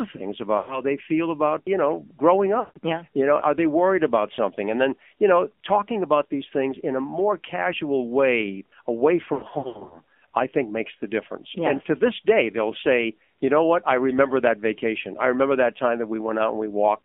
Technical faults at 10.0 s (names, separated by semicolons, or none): AMR narrowband mobile codec; lost AMR speech frames